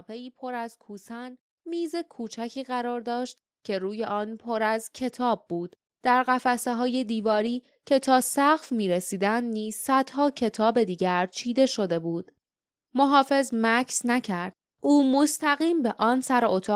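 From 0.07 s to 7.19 s the automatic gain control treats the input as too quiet and keeps pushing its gain upward, adding about 12 dB by the end of that stretch. Because the gain sits ahead of everything, the speech and the background noise beneath it climb together, so over those seven seconds the whole recording swells steadily louder, with the room noise rising in step rather than staying put behind the voice.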